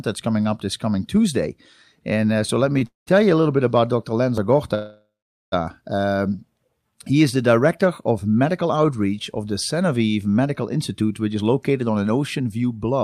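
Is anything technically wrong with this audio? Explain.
Yes, this speech has network timing faults.

At 2.79 to 2.83 s, a short stall from a late packet: the jitter buffer briefly emptied, so about 23 ms of the last sound is held too long.

Two call audio freezes follow, likely from packets held up in transit. From 2.87 to 3.09 s, just before "you a little bit", about 196 ms of fading fill, including roughly 150 ms of silence, is inserted. From 4.75 to 5.54 s, about 774 ms is filled, including roughly 450 ms of silence.

From 10.78 to 13.02 s, a jitter buffer speed-up trims surplus delay. Repeatedly cutting short pitch-period slices removes about a fifth of a second, so the speech runs about 10% fast at the same pitch.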